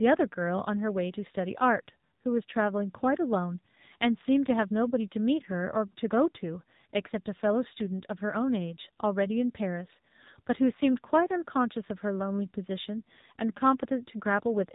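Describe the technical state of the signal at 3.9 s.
AMR narrowband mobile codec damage is present at 3.9 s, as across the whole clip. The speech is rebuilt from a vocal-tract model excited by sparse pulses, and nothing above 4 kHz survives, leaving a buzzy, synthetic tone that points to a low rate near 7.4 kbps.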